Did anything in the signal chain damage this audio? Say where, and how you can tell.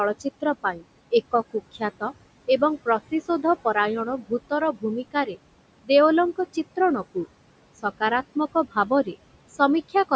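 Yes. Noise suppressor artifacts run throughout, from the call processing stage: the room noise is pulled down by about 21 dB, leaving a patchy floor on the spectrogram.

The same suppressor cut speech at 0.2–0.84, 1.32–2.12, 2.61–3.75, 4.06–5.37 and 8.35–9.15 s. Brief dips of up to about 20 dB appear as faint, swallowed speech and hollowed-out waveform envelopes.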